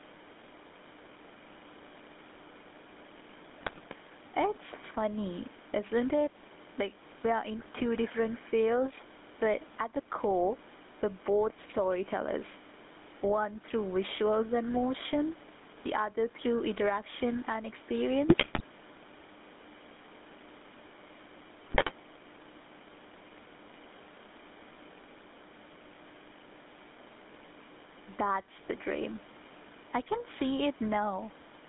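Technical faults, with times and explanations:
Throughout: gain pumping. The level swings by about 10 dB, so loud and quiet passages sit unnaturally close together and the speech feels squashed. The likely cause is input gain set far too high, with a fast limiter or compressor dragging it back down on every peak.
Throughout: GSM full-rate codec. The speech has a buzzy, gravelly roughness and is confined to a narrow line band of roughly 200 Hz to 3.6 kHz, with nothing of the air and sibilance above that. The rasp comes from the coder rebuilding the voice from a vocal-tract model driven by a sparse, regularly spaced pulse train at 13 kbps, which is why it grates rather than sounding merely muffled like a plain low-pass, and why the damage is plainly audible.
3.58–3.94 s, 7.59–7.67 s, 18.28–18.65 s, 21.65–21.91 s: GSM bit errors. In these bursts the speech breaks up into squawks, pops and gargling, sometimes with sudden jumps in level. 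Corrupted bits reaching the decoder scramble the filter, pitch and gain values frame after frame while each burst lasts, so the spectrum bends or the level blows up briefly. Unlike gain pumping, these are short, isolated eruptions of garbled sound rather than a steady breathing of the background.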